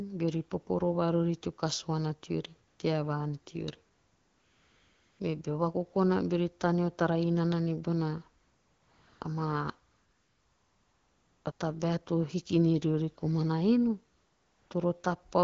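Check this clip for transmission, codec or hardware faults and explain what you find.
There is one fault, heard repeatedly. AMR comfort noise appears at 2.67–2.79, 3.93–5.19, 8.41–9.21, 9.91–11.45, 11.51–11.59 and 14.15–14.69 s. The sender judged the speech silent and stopped sending frames, so the receiver synthesised a steady, smooth noise in place of the real background. Each gap switches in and out abruptly. The underlying wideband AMR coding sounds clean, consistent with about 12.65 kbit/s.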